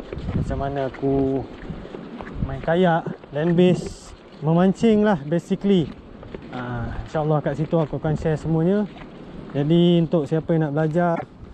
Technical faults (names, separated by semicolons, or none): damaged data in a compressed stream